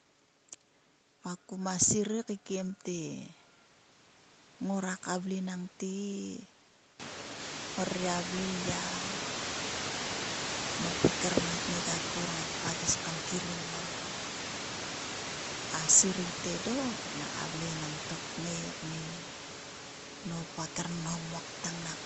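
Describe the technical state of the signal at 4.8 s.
At 4.8 s the speech is intact, with no fault present; it passes through the normal call processing, with nothing above 8 kHz.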